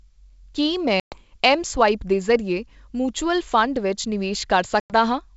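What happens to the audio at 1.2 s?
Just before 1.2 s the sound hits packet loss on an ADPCM call. From about 1.00 s to 1.17 s a hard-edged hole of around 120 ms of silence replaces what looks like several lost packets. Because ADPCM carries only differences, the decoder's predictor and step size are out of step when the sound resumes at "ਮਸਵਾਇਪ ਦੇ", so it comes back slightly distorted before settling. That mistuned recovery is what sets it apart from a simple dropout.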